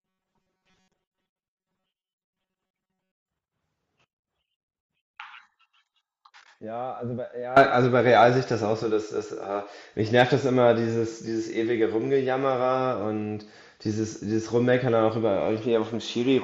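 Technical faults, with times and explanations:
0.01 to 3.29 s, robotic sound from repeated short buffers: the speech becomes a stiff metallic buzz at 188 Hz, likely from a chunk of about 5 ms looping in place of most of the real audio.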